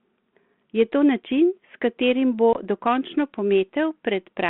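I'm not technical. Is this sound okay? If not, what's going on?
No. There is packet loss on an ADPCM call at about 2.53 to 2.58 s, just after "katerim bo". A couple of small chunks of the call, about 20 ms of sound, never arrived and were filled with silence, leaving a sharp-edged gap. This phone system sends only the change from a running guess of the next sound. After the gap, the receiving end's guess no longer matches the sender's, so the speech comes back slightly rough for a brief moment before it catches up.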